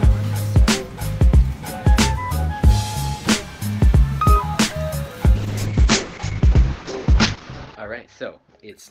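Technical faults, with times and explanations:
5.37 to 8.90 s, call bitrate drop: the sound turns rough and muffled, with highs cut off above 8 kHz, which fits an encoder squeezed from about 64 to 8 kbps.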